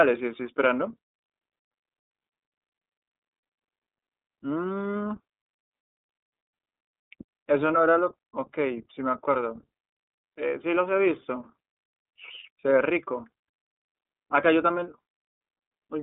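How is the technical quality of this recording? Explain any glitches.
The quality is held back throughout by one fault. iLBC codec, whole clip: each roughly 30 ms frame is coded independently at a rate fitting 13.33 kbps, leaving nothing above 3.7 kHz, a thin 250 Hz to 3.6 kHz band, and plainly rough, synthetic speech.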